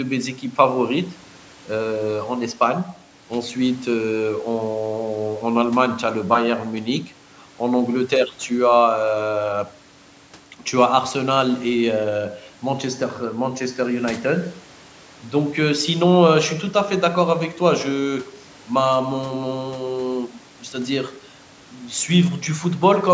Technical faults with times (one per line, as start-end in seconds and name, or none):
none